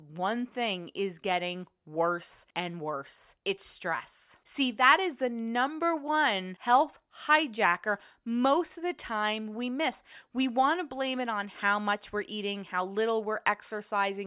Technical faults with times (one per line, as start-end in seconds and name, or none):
none